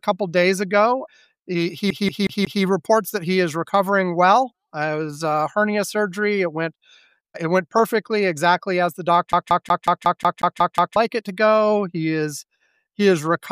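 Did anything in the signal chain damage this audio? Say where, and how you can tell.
Yes. At playback, a fast, even stutter loops one 182 ms slice at 1.90–2.63 s and 9.32–10.96 s. This is a CD stuck on one turn, the laser skipping back.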